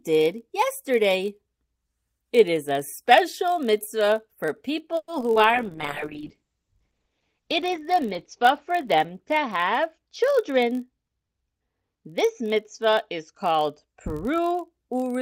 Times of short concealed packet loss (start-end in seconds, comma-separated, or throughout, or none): 5.20-5.38